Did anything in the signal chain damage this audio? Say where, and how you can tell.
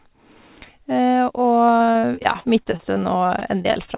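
Yes. The network stage dropped audio over and over from 1.76 s to the end of the clip, which is repeated packet loss (robotic sound). More than twenty short holes, the longest 40 ms, were patched by the jitter buffer extending the preceding sound. About 444 ms of the stretch is filled-in sound, roughly a fifth of it, and another 360 ms is simply missing. That constant patching gives the choppy texture. The call codec's cutoff at 4 kHz points to G.711 mu-law.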